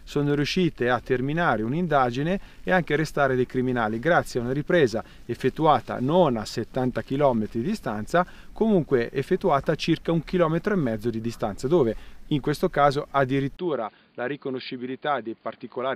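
At 13.57 s the sound drops out for about 20 ms, then returns changed and stays that way to the end. Nothing above 4.8 kHz survives, so it turns dull and boxy. It is also about 5 dB quieter, and a new background noise sits roughly 40 dB under the signal. The likely cause is an input switched to a poorer device, a second microphone or headset with narrower bandwidth and its own noise.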